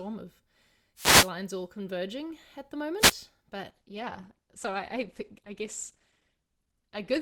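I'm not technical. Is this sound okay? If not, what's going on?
No, there are two problems. First, wireless microphone noise hits: at 0.95 to 1.32 s, just before "all converging at the", and again at 2.98 to 3.15 s, right after it, a short burst of static swishes over the speech. The radio link from the microphone briefly faded, letting receiver noise through.

Second, from 3.71 s to the end, the adaptive stream switched to a lower bitrate. The sound abruptly turns duller, with nothing above about 12 kHz, because a slower connection made the player fetch a smaller, more heavily compressed version.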